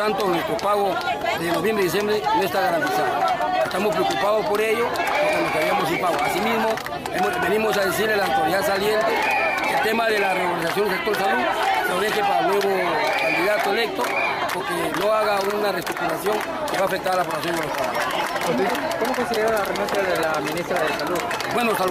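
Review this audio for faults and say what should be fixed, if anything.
Nothing needs to be fixed, because no faults turn up in this audio.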